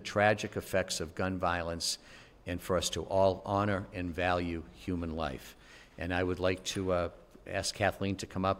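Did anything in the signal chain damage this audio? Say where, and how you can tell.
Yes. Mains hum enters in the analogue wiring from 2.51 to 5.68 s: a steady 50 Hz tone roughly 30 dB under the signal. A ground loop or nearby transformer couples the power line in, drawing a flat horizontal band at 50 Hz on a spectrogram.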